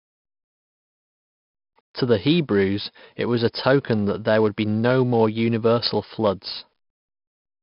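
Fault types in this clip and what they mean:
4-bit ADPCM compression: heavy gritty hiss following every loud syllable, dull with nothing above 5.3 kHz, from coarse 4-bit prediction steps at what sounds like an 11 kHz sample rate.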